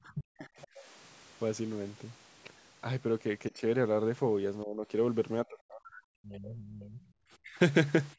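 Speech is suppressed in double talk from 0.04 to 0.68 s, dropping by roughly 40 dB. The echo canceller likely mistook overlapping talk for echo and turned the talker down. The far side's voice leaks through from 0.62 to 0.81 s, about 25 dB below the speech. Some loudspeaker echo likely escaped cancellation, leaving a faint second voice. Further double-talk dips follow at 3.51 to 3.62 s (about 10 dB), 4.64 to 4.87 s (about 15 dB), and 5.44 to 7.1 s. That last stretch is deep, near 40 dB, and the speech nearly vanishes. A brief, very faint leak, about 40 dB down, appears at 7.06 to 7.13 s. A final dip of about 25 dB comes at 7.43 to 7.58 s.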